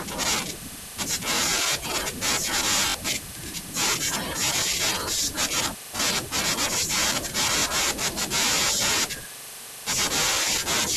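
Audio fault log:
1.37–1.39, 2.90–2.94, 4.57–4.59, 5.97–6.00, 7.60–7.62, 9.62–9.64 s: repeated buffer. Fresh audio failed to reach the output on time, so the device replayed its last block, which at 21.33 ms fits a 1024-sample buffer. Each repeat lands hard against its neighbours, so the speech catches in a brief stutter. The repeated block played twice over at 2.90 s, dropping around 40 ms of speech, while the other five repeats each lose around 20 ms.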